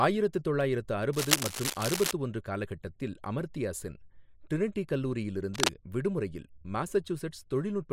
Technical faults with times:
1.13-2.12 cable scratch noise
5.54-5.69 cable scratch noise

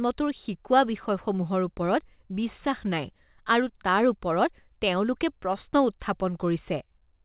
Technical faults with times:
none

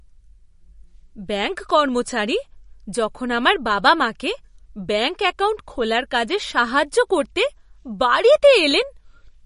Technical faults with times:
0.00-9.45 MP3 compression

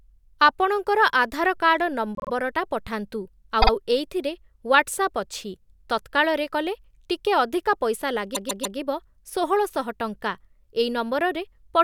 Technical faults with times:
2.15-2.30 repeated frames
3.61-3.71 repeated frames
8.34-8.77 repeated frames

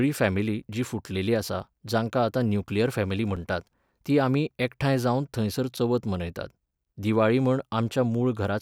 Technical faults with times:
0.63 block of digital silence
3.36 block of digital silence
5.77 block of digital silence

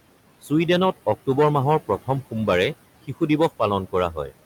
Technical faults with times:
0.00-4.46 hard clipping
0.00-4.46 noise suppressor artifacts
4.14-4.34 speech cut by the noise suppressor

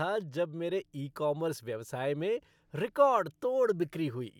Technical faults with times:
none

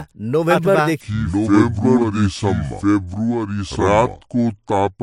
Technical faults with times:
0.00-5.03 doubled audio track
1.01-5.03 section at the wrong speed

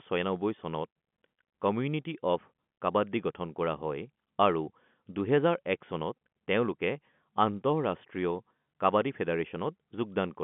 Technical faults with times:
none

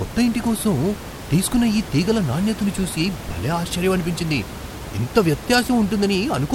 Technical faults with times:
none

